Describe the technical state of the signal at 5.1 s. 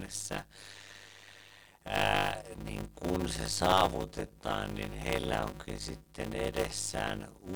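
At 5.1 s, as throughout the whole clip, a block size mismatch (padded) is in effect. One stage hands over shorter blocks than the next stage reads, which fits 256-sample writes into blocks of about 480 samples, and the missing remainder of each block is filled with silence. These regular gaps cut the speech into a buzz at 100 Hz, and the stretching makes the speech run at 0.533 times normal speed while keeping its timbre.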